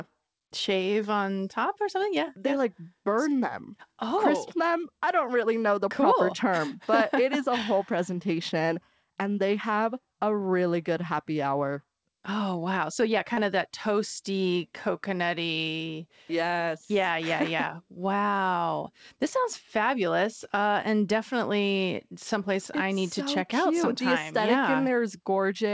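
At 13.34 to 13.40 s, just before "of that toasty coconutty", the speech briefly smears and wobbles, a short blurred patch where the sound seems held rather than articulated. This is short concealed packet loss: about 30 ms of audio failed to reach the decoder in time, so the receiver extrapolated the preceding sound to fill the gap and then blended back into the real signal. The call codec's band limit is also audible, with nothing above 8 kHz, consistent with G.722 at 64 kbps.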